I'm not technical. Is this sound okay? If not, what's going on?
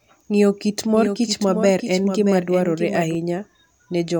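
No. From 0.95 to 3.15 seconds there's a doubled audio track. A quieter copy trails about 0.7 seconds behind, likely from the sound being recorded twice.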